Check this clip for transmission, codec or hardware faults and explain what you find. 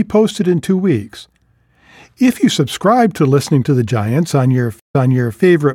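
One transmission fault is audible. Stream reconnect, 4.80 to 5.40 s: the link broke and a fresh decoder restarted, giving 134 ms of silence, then speech repeats from 470 ms earlier.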